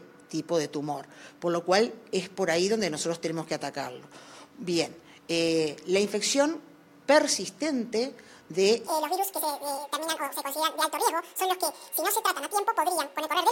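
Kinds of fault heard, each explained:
Section at the wrong speed: from 8.87 s to the end, the audio runs 1.9 times faster than recorded, so pitch and tempo jump together, roughly ten semitones higher and clearly hurried, likely from playback or editing against a mismatched clock.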